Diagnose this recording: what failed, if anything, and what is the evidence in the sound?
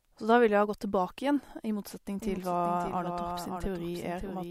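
A doubled audio track starts abruptly at 2.22 s and runs to the end: a dry, full-band copy of the speech trails about half a second behind, a few dB quieter, with no decay. The likely cause is a second, slower capture path or an edit stacking two offset copies.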